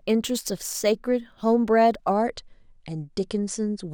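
From the start to about 2.14 s the speech shows imaging from linear upsampling. The rate appears to have been raised by joining samples with straight lines, which fits a conversion from about 22 kHz up to 44.1 kHz. That interpolation filters poorly, so the top of the original band sounds dulled while a faint mirrored copy of the spectrum remains between 11.03 and 22.05 kHz, roughly 25 dB below the signal, adding a light metallic shimmer to sibilants. On a spectrogram this appears as a fainter, flipped reflection of the speech energy above 11 kHz.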